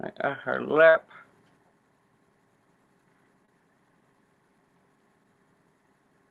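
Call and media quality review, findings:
Burst of packet loss, 0.89 to 0.95 s: run of consecutive packets lost or late at the receiver's jitter buffer. Decoder stretches the last sound for about 50 ms and fades it down, giving a brief held buzz or dimming hiss, then playback resumes with that stretch of audio missing.

Short concealed packet loss, 3.45 to 3.49 s: roughly 20 ms never reached the decoder in time. Concealment extrapolates the preceding sound and crossfades back into real audio, heard as a quick smear or wobble. Band-limited to 12 kHz through the Opus path, consistent with a bitrate near 32 kbps.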